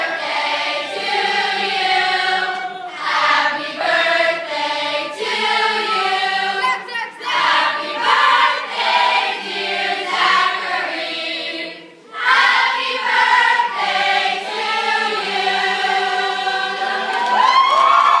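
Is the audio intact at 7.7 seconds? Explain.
Yes, at 7.7 seconds the audio is intact, with no dropout, click, distortion or other fault at that moment.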